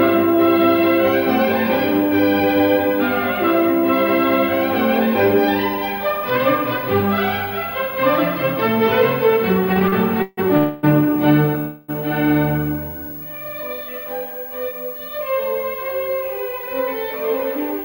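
Between 9.73 and 10.39 s the audio shows repeated stalls (stutter): four short gaps, the longest 152 ms, are bridged by continuing the preceding sound, so about a third of that span is filled in and the passage drags and catches while nothing is lost. Two call audio freezes follow, at 10.57 to 10.85 s (256 ms) and 11.59 to 11.90 s (295 ms). In each, the last sound is drawn out as a fading buzz or hiss that never reaches silence, and the audio then resumes where it stopped, likely because delayed packets left the jitter buffer empty and added that much delay. From 15.02 to 17.79 s a jitter buffer speed-up runs the audio at 106 % speed with unchanged pitch, trimming roughly 150 ms in small pitch-period pieces to shed the built-up delay, which makes the end sound hurried.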